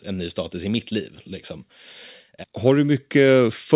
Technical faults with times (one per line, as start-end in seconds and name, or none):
0.05-1.21 automatic gain rising
2.62-3.75 automatic gain rising